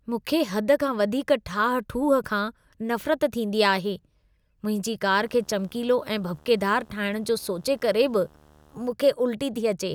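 From 5.07 to 8.92 s, a steady 75 Hz buzz with a fizzy hash above it sits roughly 30 dB below the speech. This is video or display buzz: a screen or video cable coupling its field-rate interference into the audio path.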